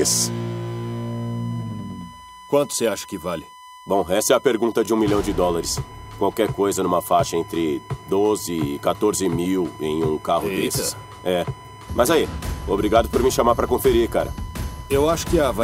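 USB whine runs from start to finish: a steady 1 kHz tone sitting about 20 dB below the signal. Current drawn by the USB bus in regular 1 ms frames leaks into the audio through the power or ground wiring, producing this fixed-pitch, thin, piercing hum under everything.

Overlapping chunks appear from 4.86 to 4.88 s, where a 20 ms stretch of sound plays twice. The audio was handled in blocks, and this block began before the previous one had finished, which fits a chunk length of about 6 s. The doubled slice is heard as a brief click or stutter at the join.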